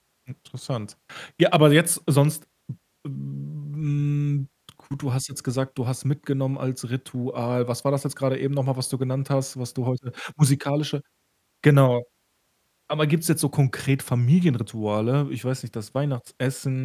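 No technical faults are audible.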